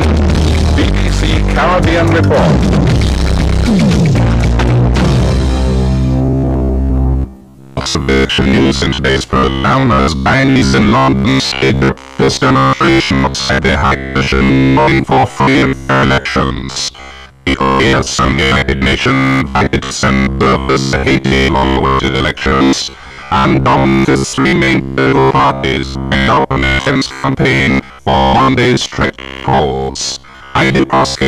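From 6.26 s to the end at 31.27 s, the audio takes on robotic sound from repeated short buffers: a rigid, metallic buzz at 66.7 Hz. The likely cause is starved playback looping the last 15 ms segment, with around 70% of the material being repeats rather than new audio.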